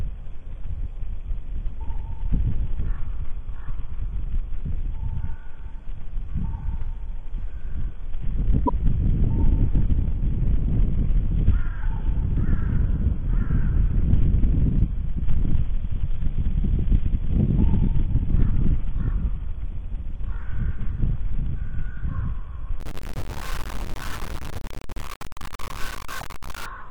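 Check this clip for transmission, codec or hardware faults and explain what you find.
Two kinds of fault are present.

At 8.65 to 8.70 s and 26.20 to 26.22 s, a broken MP3 bit reservoir is likely: cut frames leave later ones reading wrong data, so the sound jumps with a brief garbled glitch.

From 22.80 to 26.66 s, low bit depth without dither is likely: 5-bit truncation leaves an error only around 15 dB down, heard as grainy distortion that follows the sound.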